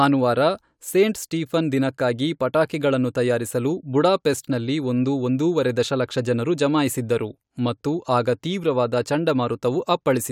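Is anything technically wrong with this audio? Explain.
No, the speech comes through as a steady, intact signal with no audible technical faults.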